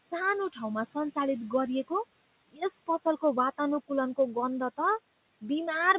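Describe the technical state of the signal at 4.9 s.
Noise suppressor artifacts at 4.9 s, present throughout the clip: the suppressor lowers bands it treats as steady noise by about 19 dB, so the background dips and swells with the speech. The audio stops at 4 kHz, which fits a narrowband call codec such as G.711.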